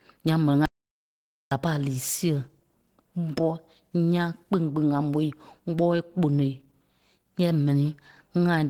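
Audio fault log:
throughout: Opus compression. The speech sounds hoarse and somewhat muffled, with a grainy, rough texture where finer detail should be; the damage is plainly audible. This is likely Opus coding at a very low rate. The sound fits about 16 kbps, where the encoder drops into its hybrid speech mode. Starved bands get filled with folded or noise-like energy instead of being left empty. That is why it sounds rough rather than swirly, even though content still reaches 20.2 kHz.
0.66–1.51 s: audio dropout to silence. Right after "ǹyaŋ m̀ɛni" the sound cuts off into silence, with no room tone underneath, and resumes mid-flow at "a pâ a lii". About 0.86 s is missing, and whatever was said in that span is unrecoverable. The likely cause is a momentary loss of input, such as a disconnected device, a dropped link or an accidental mute. The recorder kept writing silence until the signal returned.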